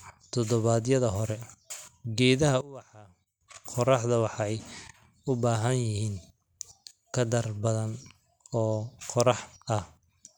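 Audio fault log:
2.61–3.41 s, one channel inverted: the speech drops by about 20 dB to a faint copy for 0.8 s. This is likely one stereo channel flipped in polarity, so the centred content cancels on mono summing and only the faint inter-channel difference remains.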